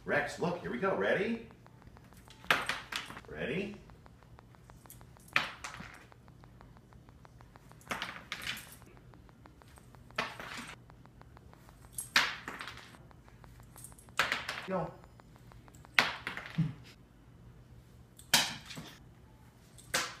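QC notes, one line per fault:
0.09–15.86 s, train of clicks: a repeating pulse, likely from nearby equipment interference or a faulty connection, enters at a steady 6.28 per second, around a hundred in all. The similar clicks are roughly as loud as the sound, so regular ticking is heard throughout the span, pauses included.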